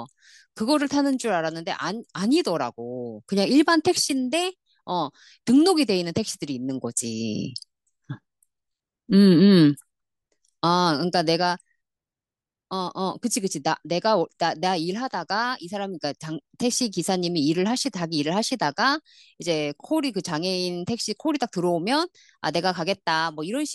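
Nothing stands out to flag here, since the speech runs along without any technical fault turning up anywhere in it.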